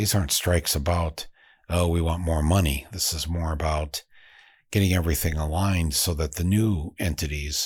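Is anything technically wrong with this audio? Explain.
No, no technical faults detected.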